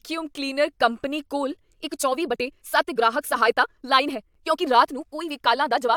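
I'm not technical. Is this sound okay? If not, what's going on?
No. Time-stretched section, from 1.73 s to the end, right after "ਕਲੀਨਰ ਕੰਪਨੀ ਕੋਲ": the speech suddenly runs about 1.63 times faster, rushed but at the same pitch, likely from software dropping tiny slices to shorten it.

Gap between stream segments, at 4.34 s: a brief hard-edged hole of about 8 ms, where two 4-second chunks of the stream don't quite meet and the player fills the gap with silence.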